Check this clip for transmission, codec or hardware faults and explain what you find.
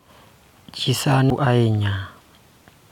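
Two short faults from damaged data in a compressed stream break into this speech clip, at 1.30 s and 2.56 s. At each point, corrupted bytes in the encoded file leave the decoder unable to read a frame properly, so it loses sync and scans for the next valid header. The result is a brief chirp, squawk, click or short gap lasting under 20 ms.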